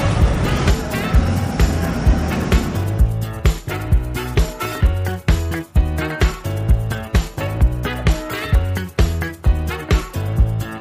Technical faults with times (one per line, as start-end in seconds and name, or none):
none